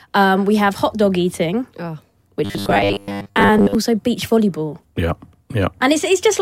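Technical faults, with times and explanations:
2.45–3.75 s, robotic sound from repeated short buffers: between "hot dog eating oh" and "beach volleyball" the speech turns into a rigid, metallic buzz fixed at 100 Hz that still loosely tracks the words. The likely cause is a stream starved of new audio, so playback keeps looping a 10 ms slice for most of the stretch while real audio is skipped. A constant buzz pitch unrelated to the talker distinguishes it from codec warble or a pitch shift.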